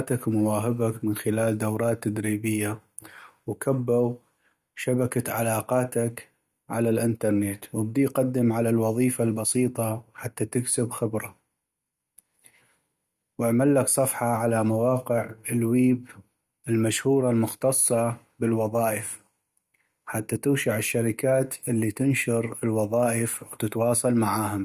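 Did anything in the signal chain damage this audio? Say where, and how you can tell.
No, nothing in the chain damaged this speech.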